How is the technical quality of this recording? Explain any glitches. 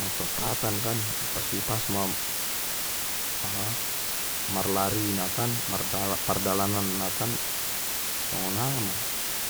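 The technical quality is poor. For the whole clip, the speech carries low bit depth with dither. Only 3 bits are used. Dither added before rounding turns the error into steady white noise. The result is a constant, even hiss, roughly as loud as the speech itself.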